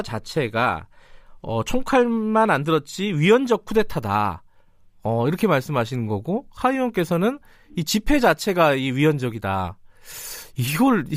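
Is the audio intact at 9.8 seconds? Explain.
Yes, the speech at 9.8 seconds plays through intact, with no audible fault at that moment.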